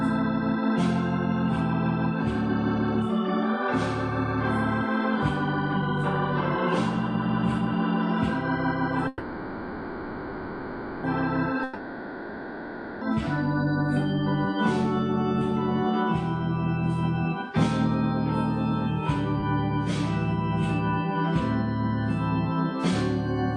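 A call audio freeze runs from 9.08 to 11.07 s. The last sound is carried on as a fading buzz or hiss for 1.96 s. When the sound resumes, it picks up where it stopped, so nothing is lost, only delayed. The likely cause is packets held up in transit while the jitter buffer ran dry. A long network dropout follows from 11.63 to 13.16 s. Here the sound is again stretched out as a decaying buzz or hiss, but the 1.38 s it covers is never recovered, and the audio returns further along without it. At 19.41 to 19.46 s there is a skip ahead. Playback jumps forward over a 20 ms join, and roughly 0.7 s of audio is dropped, either in transit or by an overflowing jitter buffer. The material on either side is butted almost directly together.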